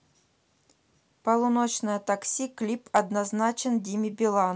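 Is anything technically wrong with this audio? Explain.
Yes. From 2.96 to 2.99 s, hard clipping hits a speech peak. It overshoots the level the signal chain can pass by about 3 dB, so the waveform tops are sliced flat. This adds a brief high-pitched crackle, sharper and grittier than the rounded warmth of soft saturation.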